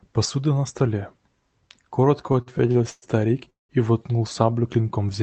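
From about 2.27 to 3.05 s the speech runs into repeated stalls, a proper stutter. Packets were reaching the receiver late, so its jitter buffer kept draining and it had to stretch the last bit of sound to cover. That happens seven times, filling roughly 217 ms, a bit over a quarter of that stretch, with the longest hold at 107 ms. Nothing's actually lost, but the speech drags and hiccups right up to "и воткнул".

Then at 3.50 s there's a call audio freeze lasting until 3.72 s. The sound hangs briefly as a fading continuation of the last bit of speech and then drops to silence for about 160 ms. Packets were likely held up in transit, emptying the buffer again, so about 192 ms of gap gets inserted and everything after it slides later by that much. Once it picks up again at "и воткнул", nothing has been skipped, and the Opus call path's 8 kHz band limit is still audible as the usual dull top end.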